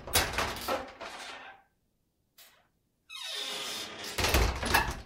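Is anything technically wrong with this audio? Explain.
No, nothing here stands out as technically wrong; these sounds come across without any fault worth pointing to.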